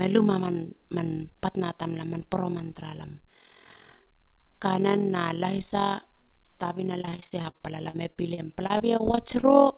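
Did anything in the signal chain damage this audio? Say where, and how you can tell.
Yes. A frame-based processing stage, where audio is windowed, processed and reassembled by overlap-add, used windows whose overlap does not sum to a constant gain. The level therefore swells and dips once per frame, at around 40 Hz, with a depth of about 11 dB, for the entire clip. That periodic gain modulation is what gives the speech its fast, rough flutter, a robotic tremolo sitting on every syllable.

On the network side, from 7.02 s to 9.45 s there is a run of repeated packet loss with robotic sound: about twenty separate holes, none longer than 38 ms, covering roughly 340 ms of missing audio. The receiver's concealment filled each gap by extending the last sound, and since the next loss arrives soon after, the speech turns choppy, with small pieces absent. The G.711 A-law call path itself shows its expected 4 kHz band limit.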